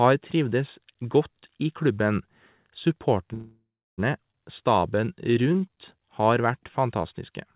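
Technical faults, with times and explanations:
3.34–4.00 s, call audio freeze: Packets were likely held up in transit until the jitter buffer ran dry. The last sound is stretched into a fading buzz, then about 0.32 s of silence, and speech resumes where it stopped, inserting a 0.64 s gap without losing anything.
4.32–4.35 s, skip ahead: A stretch of roughly 0.3 s of audio was dropped while later packets were already queued, so playback leaps forward. Only a 12 ms join bridges the jump, and the speech on either side butts together almost directly.
4.61–7.33 s, jitter buffer slow-down: To build up a reserve, the jitter buffer repeated single pitch periods and pause fragments. The speech plays at 90% speed with pitch unchanged, adding 279 ms, with drawn-out sounds.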